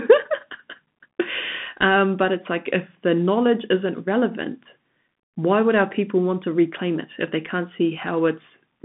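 From start to finish, the speech has passed through a Bluetooth CVSD headset codec. The band runs from roughly 150 Hz to 3.5 kHz, with nothing at all above 3.8 kHz, which gives the familiar narrow headset sound. CVSD sends a single up-or-down bit per sample and adapts its step size. When the signal moves faster than the step can follow, loud bright passages distort and sibilants turn scratchy. A granular hiss also sits under the speech. This fits a 64 kbps CVSD link.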